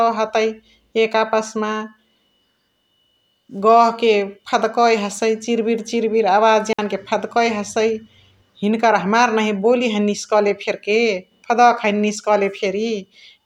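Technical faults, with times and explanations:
6.73 to 6.79 s, digital wireless dropout: the speech just stops for about 60 ms and comes back, leaving a clean little hole of near silence. What gives it away is how tidy it is, with no crackle, hiss or burst of noise on either side. That's the receiver losing too much of the digital link, muting with a very quick fade, and then picking the signal back up.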